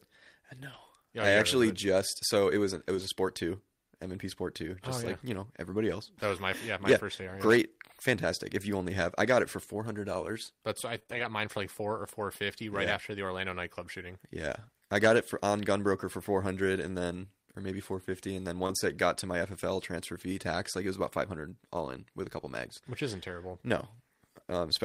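Lost packets rebuilt from error correction occur at 0.73 s, from 2.95 to 3.05 s between "it was an it" and "sport two", and at 18.70 s before "it got to my" in this speech recording. The decoder played low-bitrate copies carried in following packets, so there is no gap, just rougher, noisier audio. Repeated packet loss (robotic sound) runs from 10.95 to 11.25 s, after "four hundred dollars but" and before "mine for like four". Three short holes were each patched by extending the preceding sound, leaving a choppy texture with pieces missing. Short concealed packet loss spans 18.67 to 18.72 s. About 20 ms never arrived in time and was filled by continuing the previous sound, giving a brief smear.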